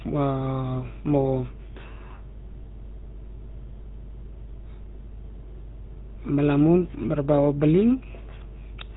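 From start to finish, the speech carries the GSM full-rate codec's signature damage, and it's plainly audible. The codec rebuilds the voice from a vocal-tract model fed by a sparse pulse train, which leaves a buzzy, gravelly grain on every syllable. Nothing gets through above roughly 3.8 kHz, so the top end is gone and sibilants go dull. The overall character fits a 13 kbps bitrate, the old full-rate standard.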